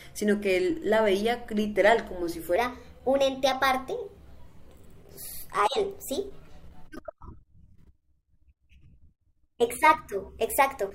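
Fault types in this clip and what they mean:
Section at the wrong speed: from 2.56 s onward, speech plays 1.22 times fast, about three semitones higher and hurried, unlike a pitch shift; likely clock mismatch.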